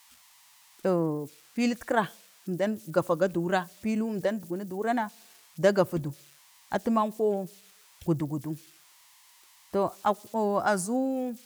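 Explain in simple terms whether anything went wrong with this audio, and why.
Converter idle tones run through the whole recording: a faint whistle near 1 kHz, heard when the speech goes quiet and the converter settles into repeating patterns.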